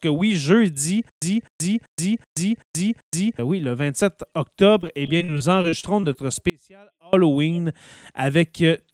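Right after "oui jeudi", from 1.09 to 3.39 s, there is a stutter with silent gaps. A 256 ms burst of speech plays six times, each followed by 126 ms of dead digital silence, giving an even 382 ms cycle until "oui le" resumes. The likely cause is a stalled stream replaying its last buffer. That regular, silent rhythm sets it apart from packet loss.

From 4.81 to 6.17 s comes repeated packet loss with a robotic sound. Eleven short holes, the longest 38 ms, are patched by extending the preceding sound, so about 17% of the stretch is concealed. The result is choppy. Unlike the stutter, the gaps are brief and filled rather than silent.

From 6.50 to 7.13 s there is an audio dropout to a faint residue. The signal cuts off abruptly for about 634 ms, leaving only a faint trace roughly 30 dB down, not true silence. This is likely a lost feed with the downstream path still live. It is too sudden to be a pause or a fade.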